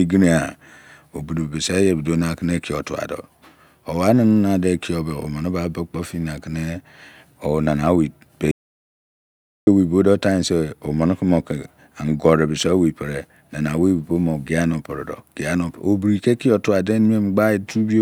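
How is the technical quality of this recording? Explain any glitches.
The recording has one glitch, an audio dropout to silence, from 8.51 to 9.67 s. The input was likely lost while writing continued, leaving about 1.16 s of dead silence with no room tone before the speech resumes on "owei bodo tinsr omene".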